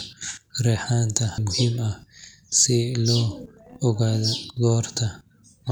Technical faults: none

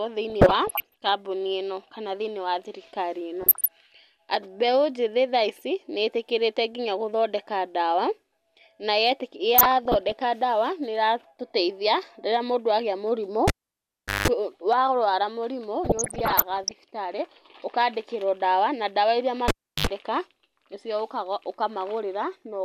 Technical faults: DAB burbling; cable pulled and plugged in

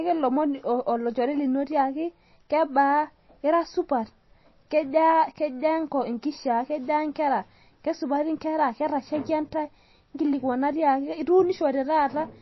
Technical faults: MP3 compression

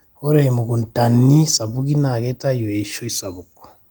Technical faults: none

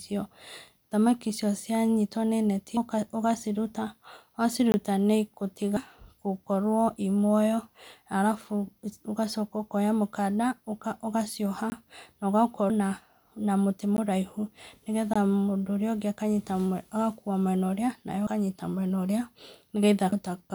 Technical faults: compressed frames skipped; block of digital silence

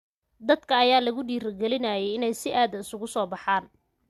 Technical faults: none

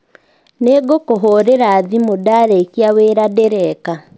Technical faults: resampler restarted on every block

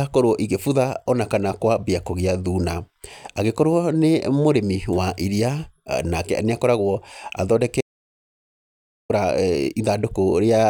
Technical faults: audio dropout to silence

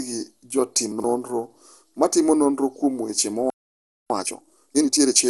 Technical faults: generation loss; chunks out of order; playback stall; time-compressed catch-up

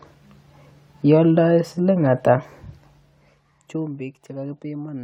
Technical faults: zipper noise

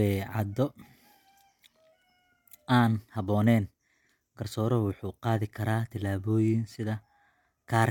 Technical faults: none

